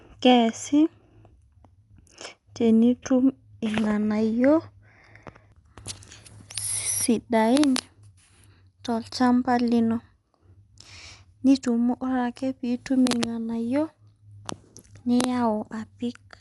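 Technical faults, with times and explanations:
Throughout: Dolby Digital compression, likely at a low bitrate that fits around 64 kbps, has cut the band to nothing above 11.6 kHz and left many frequency lines filled with noise, so the speech sounds dull, with a plainly audible rough, fluttering grain.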